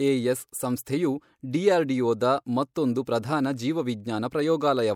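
Speech with pre-echo at 2.74 s and 3.05 s: a brief hiss of about 19 ms leads each sharp attack, since the codec's block noise spreads ahead of the onset, unlike reverb, which trails afterwards.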